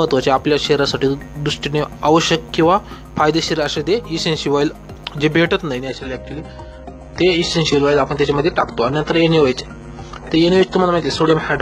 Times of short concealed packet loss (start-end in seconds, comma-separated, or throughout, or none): none